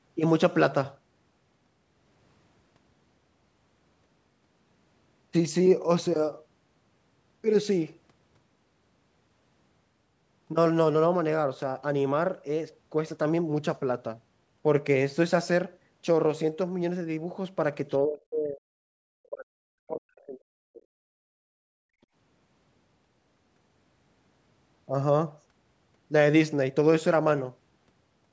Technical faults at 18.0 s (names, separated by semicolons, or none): other side's voice leaking through; speech suppressed in double talk